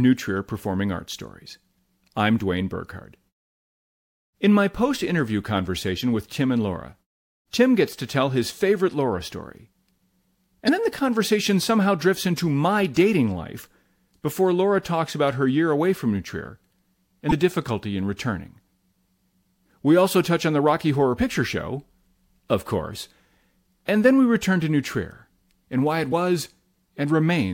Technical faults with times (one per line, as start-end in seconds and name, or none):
10.65-10.69 damaged data in a compressed stream
17.28-17.33 damaged data in a compressed stream
21.15-21.19 damaged data in a compressed stream